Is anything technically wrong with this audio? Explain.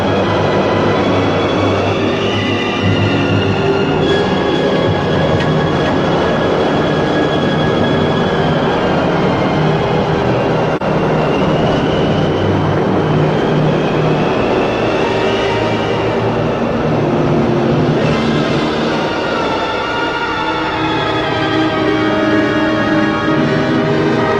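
Yes, there are two faults.

Doubled audio track, throughout: a second full-band copy of the sound runs about half a second behind the original and about 5 dB quieter, with no room colour. This is likely an edit or slower capture path holding two copies out of step, heard as a dry echo.

AAC frame loss with muting, from 10.76 to 10.82 s: a brief dip of about 43 ms, which fits one lost AAC frame whose spectrum the decoder zeroed. The overlapping windows fade the sound out and back in, so the dip has soft edges.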